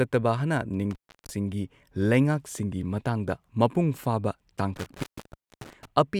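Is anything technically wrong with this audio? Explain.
Yes. An intermittent contact interrupts the speech twice, at 0.91 to 1.30 s and 4.76 to 5.85 s. A loose cable or plug opens briefly, for about 0.34 s and then 0.59 s. The signal drops to faint hiss, with crackle where the connection breaks and remakes.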